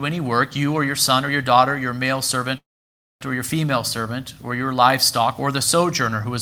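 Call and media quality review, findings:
Call audio freeze, 2.57–3.23 s. Brief buzz, then about 0.59 s of silence. Resumes where it stopped, nothing lost, now running 0.63 s later. Likely jitter buffer underrun from delayed packets.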